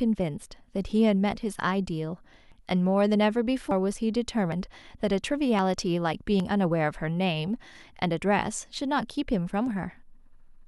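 At 2.52, 3.71, 4.52, 5.59 and 6.40 s the speech jumps forward, most likely a dropped buffer (overrun): samples were overwritten before being read, and the two sides were spliced together. Each skip loses roughly 40 ms, except at 3.71 s, where about 150 ms vanishes. The waveform shows abrupt discontinuities with no silent gap, and the spectrogram shows thin vertical broadband lines where the harmonics break.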